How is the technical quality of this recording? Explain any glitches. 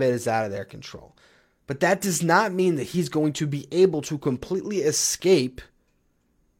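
The technical quality holds up, with no glitches to explain anywhere in the recording.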